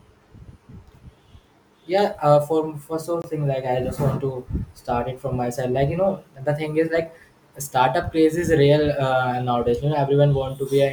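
Speech clip with a Bluetooth stall from 3.22 to 3.24 s, just before "thing like." Sound drops to silence for about 21 ms, likely from interference draining the headphone buffer.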